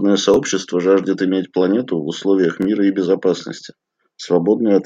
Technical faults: repeated buffer

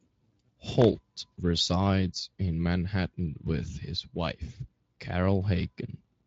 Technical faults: loose connector crackle

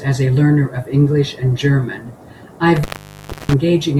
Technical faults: intermittent contact

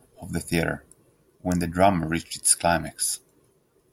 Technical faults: electrical switching spike

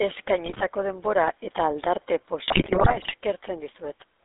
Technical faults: GSM full-rate codec; GSM bit errors

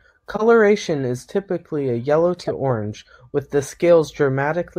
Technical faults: corrupt frame decoded

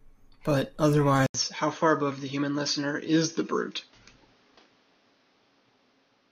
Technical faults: input switched to a poorer device

